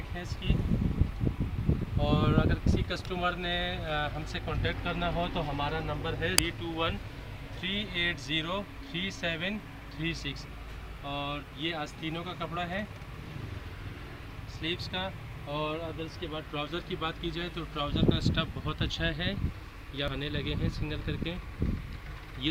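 At 2.67 s, 6.38 s and 20.08 s there are brief blips, each from damaged data in the compressed stream. Corrupted bytes there threw the decoder off, so it misread those frames and lost sync before finding the next frame header.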